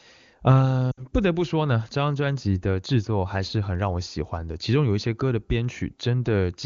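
Speech carried over an AMR wideband (HD Voice) link, with coding artefacts faint at most, has lost AMR speech frames from 0.91 to 1.06 s. This roughly 60 ms gap fits three dropped 20 ms frames. Over it the decoder repeats the last good voice settings with falling gain, so the sound drops to near silence within two frames before returning weak or rough for a moment.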